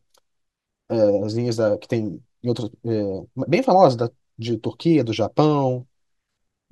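Throughout the speech runs a 50 Hz buzz from a resampler restarted on every block: each 20 ms block converting 44.1 kHz to 48 kHz lacks its neighbours' samples, so every edge clicks. Unlike mains hum, it vanishes in pauses.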